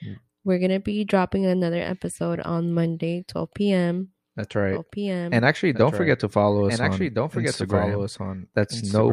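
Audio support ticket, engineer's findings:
Doubled audio track, 4.71 s to end. A second full-band copy of the speech trails by roughly 1.5 s, around 5 dB below the original, with no decay or room colour and an abrupt entry. Likely a slower second capture path or a misaligned edit copy.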